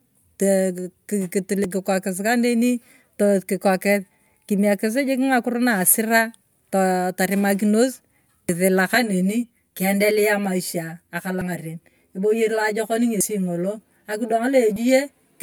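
At 1.64 s there's a jump in the speech, where roughly 20 ms of audio simply isn't there. That's likely a dropped buffer (overrun): the software didn't pull its samples off the hardware in time, they were overwritten, and the audio on either side got butted together with no gap. The same thing happens again at 8.49 s, losing something like 70 ms.

From 8.95 s to the end, channel delay (comb filtering) kicks in. One channel is running about 10 ms behind the other, and when the two are folded to mono, the content they share cancels at evenly spaced frequencies, the first notch sitting down around 40 Hz. The speech goes hollow and phasey for the rest of the clip.

The dropouts keep coming through that stretch too, each a skip forward: about 70 ms gone at 11.41 s, around 40 ms at 13.21 s, and a shorter one of around 20 ms at 14.76 s.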